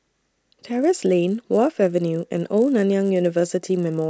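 Throughout, the resampler restarted on every block, converting each 10 ms block from 24 kHz to 16 kHz in isolation, so every block edge picks up a small error. At 100 edges per second these merge into a steady 100 Hz buzz riding on the speech, present only while there is signal.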